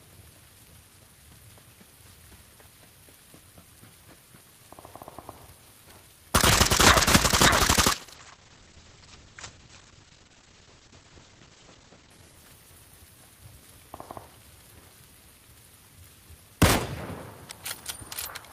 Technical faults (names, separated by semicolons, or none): clock drift buffer slips; call bitrate drop